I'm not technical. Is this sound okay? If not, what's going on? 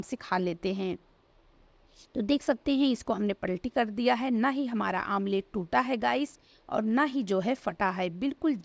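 Yes, nothing wrong can be heard in this sound.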